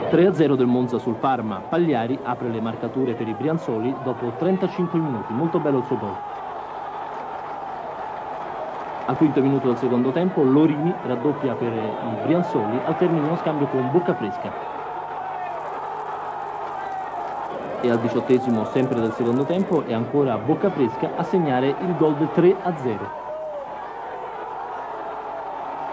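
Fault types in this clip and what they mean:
Resampler restarted on every block: From 15.5 to 19.8 s, each 10 ms block was rate-converted in isolation, which points to a 24 kHz to 16 kHz conversion. At every block edge the converter lacked the true neighbouring samples and filled in wrong values. This leaves a small error every 10 ms, and at this block length the errors merge into a 100 Hz buzz that follows the sound, rather than separate ticks.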